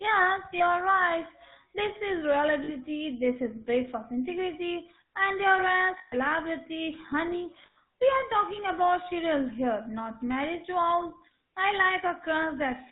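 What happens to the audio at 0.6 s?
A dropped GSM frame, a lost GSM frame, hits between 0.58 and 0.61 s: the decoder fills the gap by repeating the last good frame's vocal-tract and excitation settings. The sound briefly holds as a rough, metallic ring, a gap that fits a single lost 20 ms frame.

Underneath, the GSM full-rate codec is running at 13 kbps, rebuilding the sound from a vocal-tract model driven by sparse regular pulses and cutting everything above 4 kHz. That leaves a plainly audible buzzy, gravelly roughness and a dull, narrowband tone.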